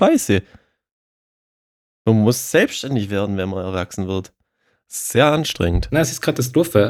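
From the start to about 2.95 s, just before "werden wenn man erwachsen", there's a crude rate conversion: unfiltered linear interpolation, likely a 44.1 kHz to 48 kHz change. It leaves a gritty, inharmonic fizz tracking the louder, brighter sounds, roughly 30 dB down.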